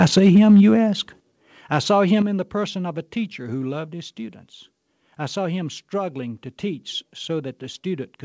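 From 0.00 to 0.73 s, leading into "ask I saw", the loudest peaks are flattened. This is microphone overload. The peaks run about 8 dB past the converter's limit, likely because the input gain was set too high. A few percent of samples are clipped. The result is a harsh, crackling edge.

At 1.2 s, just before "I saw", the level falls suddenly by about 10 dB. At 2.22 s, between "ask I saw" and "in the person of", it falls again by about 6 dB. Both are microphone volume stepped down. The call software likely cut the input gain after sensing overload. The voice and the background drop together.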